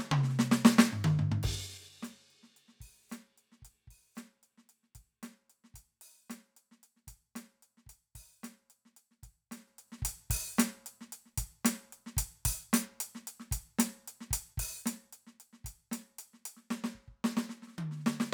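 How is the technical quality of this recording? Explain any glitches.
One glitch stands out in this music recording: zipper noise from 1.28 to 1.93 s. A fade of about 20 dB is applied in unsmoothed 3 dB jumps, around ten per second, each jump clicking audibly. On a waveform the envelope descends in visible stairs; a spectrogram shows thin vertical broadband lines at each step.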